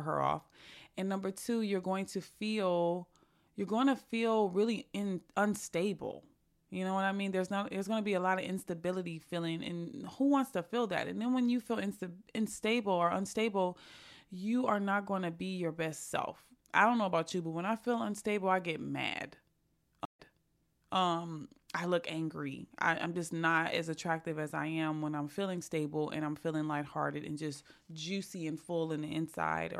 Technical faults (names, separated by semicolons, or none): stream reconnect